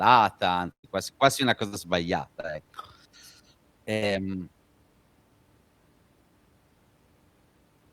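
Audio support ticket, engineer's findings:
Burst of packet loss at 0.71–0.85 s, 1.67–1.74 s and 3.93–4.04 s: jitter buffer or network path. Last sound held then faded, dropping to near silence in the first one. About 120, 60 and 80 ms of audio skipped on resume, unlike a plain dropout, which would resume in place.

Short concealed packet loss at 2.40–2.45 s: decoder concealment. Brief smear, about 40 ms missing, blended back smoothly. Shorter than a burst, with no audible fade.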